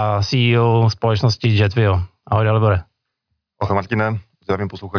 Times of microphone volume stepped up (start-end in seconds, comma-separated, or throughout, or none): none